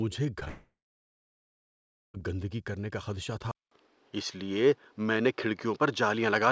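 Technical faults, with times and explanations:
0.40–0.43 s and 0.45–0.48 s, short concealed packet loss: two brief gaps of about 20 ms each were patched by extending the preceding sound, heard as small smears, with blurred spectrogram frames.
0.48–2.16 s, long network dropout: the sound trails off into a fading buzz or hiss, then about 1.4 s of near-silence, a flat waveform and empty spectrogram, until "گندگی کرنے کا خدشہ" resumes. This is likely packets not arriving.
3.51 s to the end, input switched to a poorer device: after "گندگی کرنے کا خدشہ", a 200 ms silence precedes duller or boxier sound. This is likely a change of input device. The spectrogram's energy now stops at 6.5 kHz rather than the call codec's 8 kHz. The level shifts by roughly 5 dB, and the new noise floor sits about 40 dB below the signal.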